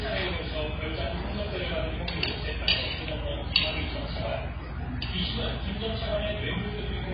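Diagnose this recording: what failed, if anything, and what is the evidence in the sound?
The codec stage is at fault. The whole clip sounds dull and smeared, with nothing above about 5.1 kHz. That's likely heavy AAC compression: an AAC-LC encoder short of bits, consistent with roughly 16 kbps, chops off the top band and quantises what remains coarsely.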